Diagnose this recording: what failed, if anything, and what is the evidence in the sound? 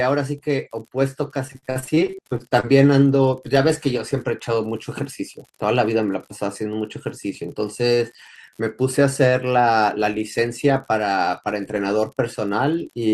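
An unreliable data bit at the converter or digital interface causes a steady crackle and fizz running the full length of the speech, pauses included. One marginal data line flips its bit in a random share of samples, and each error lands as an identical-sized spike.

Repeated packet loss (robotic sound) on the network hits between 1.47 s and 2.71 s. The speech turns choppy as a rapid run of short holes, the longest 52 ms, is patched by extending the previous sound, concealing about 28% of that span.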